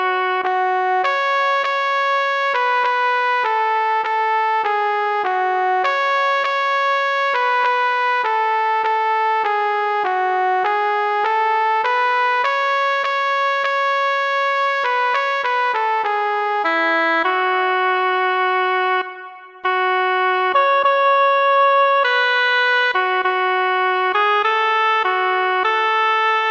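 Nothing in this audio trips the ear at any point; it just runs along with no dropouts, glitches or other technical faults to point out.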